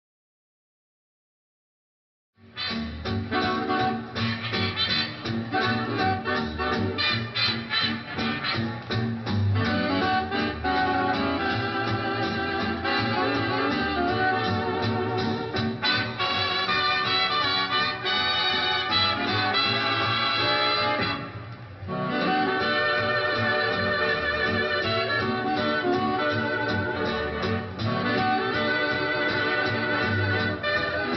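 No technical faults are present in this audio; the smooth fade-in that begins at roughly 2.5 s and reaches full level at 2.92 s is an ordinary editorial ramp, with no click or hard edge.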